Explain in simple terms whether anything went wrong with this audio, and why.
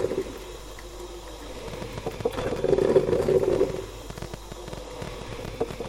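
A train of clicks runs from 1.68 s to 5.87 s. Roughly forty irregular ticks arrive about ten times per second, likely interference from nearby equipment.

Frames out of order occur at 2.37 to 2.59 s and 5.04 to 5.25 s. Two neighbouring blocks of about 0.1 s play swapped, causing a garbled flutter.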